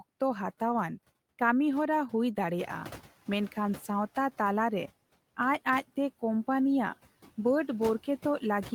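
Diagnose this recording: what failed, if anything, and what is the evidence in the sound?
Call processing is where this goes wrong, in the noise suppressor. The noise suppressor artifacts run through the whole clip: the background drops by about 15 dB between phrases and swells back under the speech, from per-band, frame-by-frame gain changes.

The second problem is the noise suppressor catching up. The room noise steps up by about 10 dB around two and a half seconds in. From 2.59 to 3.07 s it comes through with only about 8 dB of reduction, then settles down once the noise estimate adapts, which takes 480 ms.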